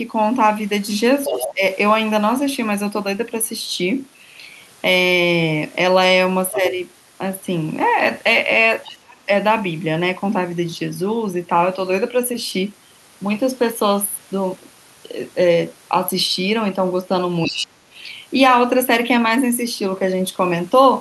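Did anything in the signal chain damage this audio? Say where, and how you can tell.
Yes. At the call-processing stage, the echo canceller likely left loudspeaker pickup in the microphone signal. The other side's voice leaking through appears as brief fragments at 1.24–1.5 s, 6.51–6.6 s, 8.84–8.97 s and 17.45–17.66 s, sitting roughly 5 to 20 dB below the talker.

The same stage shows speech suppressed in double talk. When both sides overlapped, the canceller could not tell the talker from the echo, and it likely turned everything down. The voice sinks by around 15 dB at 1.28–1.63 s and by around 35 dB at 8.94–9.29 s and 17.47–17.81 s, with each dip lasting a few tenths of a second.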